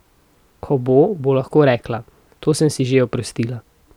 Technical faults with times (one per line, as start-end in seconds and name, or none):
none